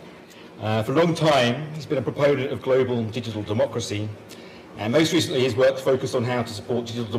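No technical faults can be heard anywhere in this audio. Nothing in the recording or playback chain draws attention to itself at any point.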